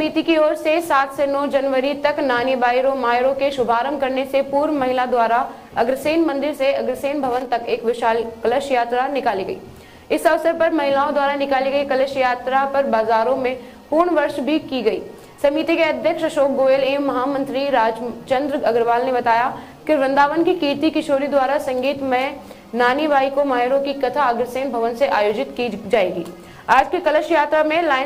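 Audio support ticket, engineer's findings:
No fault found on listen-through; signal chain presents as intended with nothing to attribute to capture, processing or transport.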